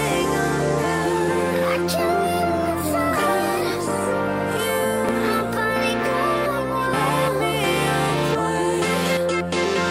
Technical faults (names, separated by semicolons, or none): overlapping chunks